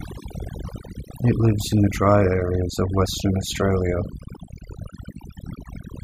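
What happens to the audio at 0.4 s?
Overdone noise removal is already at work here, and it runs through the entire clip rather than starting at this point. A noise reducer set far too hard is pushing individual frequency bands down or out whenever they sit close to its noise estimate, taking the quieter parts of the speech with them. The background drops and breaks up into twinkling, warbling specks.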